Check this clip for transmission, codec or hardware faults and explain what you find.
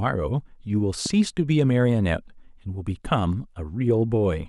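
One hardware fault is present in the speech: a single loud pop from 1.06 to 1.08 s. A sudden voltage step or pulse, likely from a plug, switch, static discharge or driver glitch, entered the signal chain and was shaped by the following circuitry. It is heard as one sharp pop, peaking a few dB above the speech, which continues underneath.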